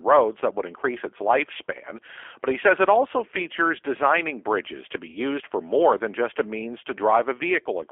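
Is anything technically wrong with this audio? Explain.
Yes. Throughout the speech, G.729 codec coding is plainly audible. The sound sits in a narrow 300 Hz to 3.4 kHz line band, and the speech is rebuilt from a vocal-tract filter, pitch predictor and a few pulses, which fits a rate near 8 kbit/s. That leaves a rough, slightly synthetic edge. Plain band-limiting would only sound muffled, not rebuilt like this.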